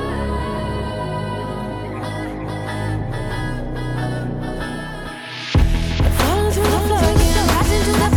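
From the start of the clip to its end, a doubled audio track runs underneath everything. A second copy of the full sound trails the original by about half a second. It sits a few decibels lower, around 5 dB down. It carries no reverb tail or room colour, so it reads as a clean repeat rather than an echo. The likely cause is the same signal being captured twice, once through a slower path.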